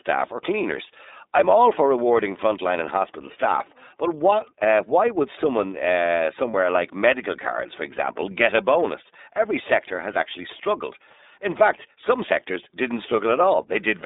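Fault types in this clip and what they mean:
iLBC codec: A narrowband VoIP codec runs through the whole clip. It codes each block of the signal on its own, and the blocking fits 30 ms frames at the 13.33 kbps mode. The line passes only about 250 Hz to 3.7 kHz. Nothing higher survives, so the speech sounds thin and boxed in. The coding damage is plainly audible. Voices take on a rough, slightly synthetic edge.
lost iLBC frames: One short gap runs from about 6.51 to 6.54 s. It lasts 30 ms, which fits a single lost frame. It sits between "why would someone uh" and "like medical cards for". The decoder fills the hole by repeating the last pitch cycle with some noise mixed in. This gives a brief held, faintly buzzy sound. Each iLBC frame decodes independently, so the speech is right again almost at once.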